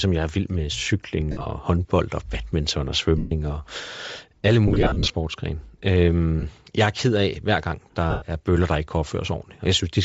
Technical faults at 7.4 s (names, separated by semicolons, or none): Bluetooth LC3 compression